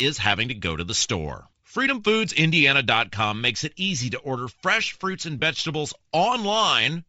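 A speech clip whose whole length carries a breathy, grainy edge, with the top of the spectrum sounding hissy and synthetic rather than simply dull. That points to a likely cause in Bluetooth LC3 compression at a low rate: the codec zeroes much of the upper band and fills it with noise, which fits roughly 32 kbps with 10 ms frames. Plain low-pass filtering would only muffle the sound, and the seething texture here is what separates this from it. Two brief faults are lost LE Audio frames, each about 20 ms long, consistent with two 10 ms frames going missing: one from 0.99 to 1.01 s, right after "to go to the", and one from 5.40 to 5.42 s, right after "order fresh fruits and". Neither is a silent gap or a click like an ordinary dropout. The decoder replays the previous spectrum with scrambled signs, so each spot becomes a short noisy smear in place of the sound.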